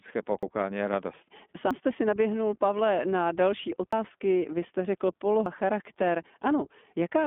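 From the start and throughout, the speech carries the iLBC codec's narrowband sound: the band runs from about 200 Hz to 3.5 kHz, with nothing above 4 kHz, and the coding damage is plainly audible as a rough, slightly synthetic texture. The 20 ms frame grain points to iLBC's 15.2 kbps mode. Each frame is coded on its own, without leaning on the frame before.

At 0.43, 1.71, 3.93 and 5.46 s the audio jumps forward, skipping roughly a tenth of a second each time. The likely cause is a dropped buffer (overrun), where samples were overwritten before being read and the surrounding audio was spliced together. A network dropout would leave a silent gap or a concealed, stretched patch. Here there is no silence, only an abrupt join with missing sound.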